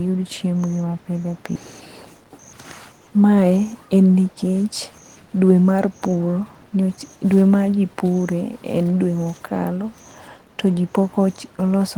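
Speech, with a skip ahead at 1.55 s, where a stretch of audio was discarded while later audio was already queued, so playback jumps forward by about a second with no gap, joining the two sides almost directly and losing whatever was said in between. From 1.81 to 3.89 s a jitter buffer speed-up follows, where the buffer held more audio than its target and the receiver repeatedly trimmed short pitch-period pieces, removing roughly a third of a second. The speech runs at about 116% speed at unchanged pitch and sounds hurried.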